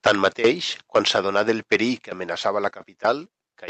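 Microphone overload runs from 0.06 to 0.5 s in this speech, with peaks about 13 dB beyond the converter's limit and roughly 4% of samples flattened. It returns from 0.95 to 1.76 s (about 7 dB over, around 1% clipped) and briefly at 2.46 s (about 1 dB over). The likely cause is an input level set too hot, so the converter squares off the loudest syllables and adds a harsh, crackling edge. Microphone volume stepped down at 0.07, 1.08 and 2.1 s, dropping the speech and the room sound together by about 3, 4 and 3 dB. This points to the call software likely reacting to a too-loud or clipping microphone by lowering the device's input gain in one step. The audio passes through the call's Opus coding, and its band stops near 8 kHz.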